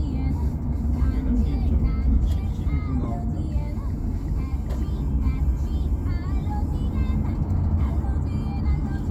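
A clip of everyday sounds with one corrupt frame decoded between 3.04 and 3.06 s: damaged bits made the decoder misplace energy across a couple of frames, giving a brief glitch with its error peaking around -20 dBFS. Unlike a click or dropout, it has spectral colour rather than a single impulse or silence.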